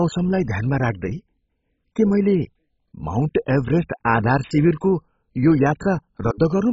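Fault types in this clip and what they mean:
MP2 compression: throughout, dull speech with nothing above 7.5 kHz and gurgling, granular distortion, likely from Layer II sub-bands starved of bits, fitting roughly 16 kbps.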